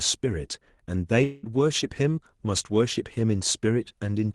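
Speech with a long network dropout from 1.23 to 1.46 s: a fading buzz replaces about 0.2 s of lost audio, likely concealed packet loss, and unlike a brief glitch it never reaches silence.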